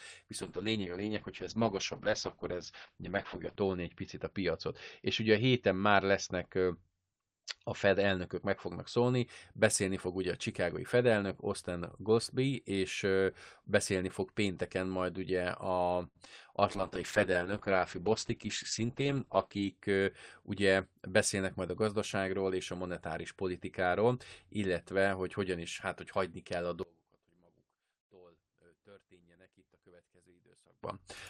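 Call bitrate drop, from 0.42 to 9.33 s: the bandwidth estimate collapsed and the encoder was pushed from 32 kbps down to 8 kbps, staying at the bottom for about 3.2 s. At that rate the codec quantises coarsely and narrows the audio band from 20 kHz to 8 kHz, so the speech loses its airy top end and takes on a muffled, watery roughness until the rate climbs back.

Short stall from a late packet, 16.07 to 16.17 s: a packet missed its playout slot, the jitter buffer emptied, and the receiver stretched the last sound for 75 ms while it waited. Once the packet arrived, playback resumed where it left off, with nothing lost. The held sound lingers unnaturally with a faint buzzy sustain, and the playout delay grows by 75 ms.

Short concealed packet loss, at 16.25 to 16.28 s: about 20 ms of audio never reached the decoder in time. The receiver extrapolated from the preceding sound to bridge the gap and then crossfaded back into the real signal, leaving a brief smear or small wobble where the true audio should be.

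A second call bitrate drop runs from 16.77 to 19.79 s, falling from 32 kbps to 9 kbps and holding its lowest rate for about 3 s. Bandwidth again narrows from 20 kHz to 8 kHz, bringing back the same dulled, grainy texture.

Jitter buffer speed-up, 18.39 to 19.37 s, overlapping that drop: the buffer had built up more audio than its target, so the receiver trimmed short pitch-period slices over and over, cutting around 70 ms in total. Playback runs at about 107% with pitch unchanged, so the speech sounds slightly rushed for just under a second.

From 26.83 to 30.83 s the speech falls by about 27 dB and turns faint, with the centred body of the sound hollowed out. The likely cause is one channel inverted: with one side's polarity reversed, everything common to both channels cancels when they are mixed to mono, leaving only the small difference between them.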